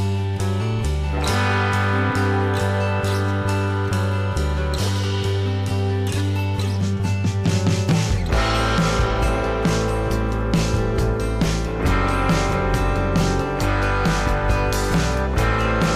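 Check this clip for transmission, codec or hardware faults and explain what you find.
No transmission, codec or hardware faults can be heard anywhere in the clip; the signal stays continuous and stable throughout.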